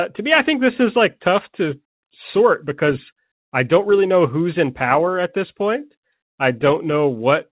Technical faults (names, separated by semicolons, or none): none